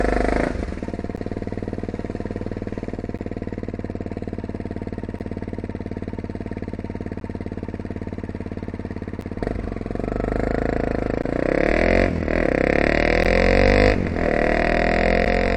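Gaps between chunks occur at 1.16, 3.18, 5.19, 7.20, 9.21, 11.22, 13.24 and 15.25 s. The audio arrives in 2.0 s blocks, and a 12 ms stretch of silence sits at each join, so the holes repeat slightly more than two seconds apart. Nothing is missing from the sound itself. It simply stops and restarts abruptly, giving brief hard-edged dropouts at a steady, almost metronomic rate.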